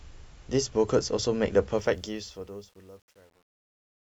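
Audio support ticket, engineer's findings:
Truncation distortion on fade-out, 1.77–4.04 s, worst from 2.17 s: speech tail turns gritty. Undithered gain stage; steps fit a 9-bit word length, not gate chatter.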